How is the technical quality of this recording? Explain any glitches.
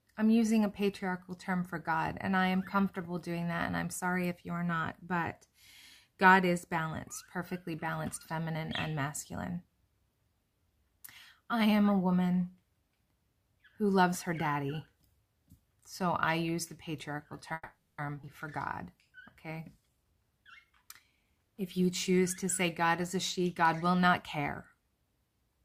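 The recording has three closely spaced glitches in the second half, all typical of audio arriving over a network call.

From 17.53 to 18.01 s the sound stalls: the last moment is stretched into a fading buzz-like fill for close to half a second, ending in a brief silence before the audio resumes where it left off. This is a call audio freeze, likely caused by packets held up in transit so the jitter buffer ran dry. The receiver invented the 450 ms of filler, so the audio is delayed rather than lost.

Between 18.22 and 18.26 s the audio jumps forward almost seamlessly, with only a tiny fill at the join. Roughly a fifth of a second of material is gone. This is a skip ahead: the held-up audio had built extra delay, and a chunk was discarded to catch up, so the two sides of the cut are spliced together directly.

From 19.76 to 21.49 s the sound runs noticeably quicker, about 112% of normal speed, while the pitch stays unchanged, which gives it a hurried feel. 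This is a jitter buffer speed-up. With backed-up audio still queued, the receiver trimmed many tiny pitch-period-sized slices, around a fifth of a second in total, to bring the delay back down.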